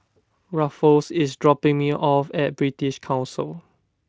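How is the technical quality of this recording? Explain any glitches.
The technical quality of this recording shows no glitches to explain, with the Speex coding it passed through leaving no audible damage.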